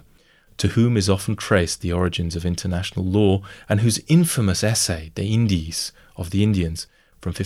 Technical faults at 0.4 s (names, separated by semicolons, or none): none